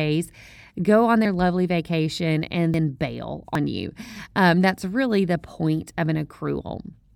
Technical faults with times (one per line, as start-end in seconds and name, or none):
1.25 dropped buffer (overrun)
2.74 dropped buffer (overrun)
3.55 dropped buffer (overrun)